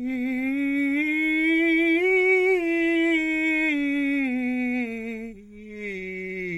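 No technical faults can be heard in this music.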